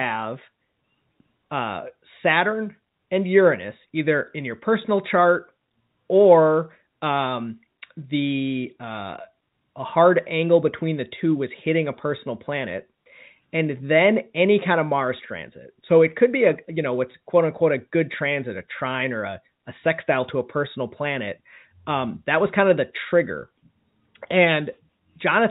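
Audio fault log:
4.32 s (just before "in your personal chart") and 17.12–17.14 s (between "be a you know" and "quote unquote a good"): packet loss with pitch repetition. A 20 ms gap, consistent with one lost packet, is filled by repeating the last pitch period, which sounds like a brief buzzy hold. On the waveform this shows as identical repeating cycles. On the spectrogram it appears as a short frozen band of evenly spaced harmonics, which, like the rest of the telephone-coded audio, stops below 4 kHz.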